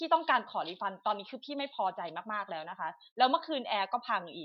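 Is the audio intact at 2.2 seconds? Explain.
Yes, the speech at 2.2 seconds is intact, with no dropout, click, distortion or other technical fault at that moment.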